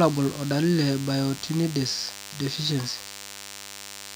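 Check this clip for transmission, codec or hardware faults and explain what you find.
One fault runs through the whole speech clip: DECT cordless phone buzz. A nearby DECT handset or base transmits a brief radio burst every 10 ms. The audio circuitry rectifies each burst. The result is a thin, steady 100 Hz buzz, rich in harmonics, sitting well below the speech.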